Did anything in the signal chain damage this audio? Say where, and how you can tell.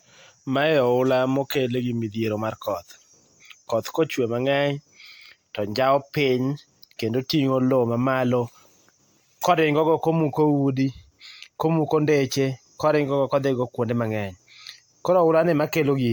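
Yes, at the codec stage: the speech was most likely re-encoded as MP3 about seven times, stacking generation loss that leaves it swirly, hollow and smeared throughout, with blurred consonant attacks.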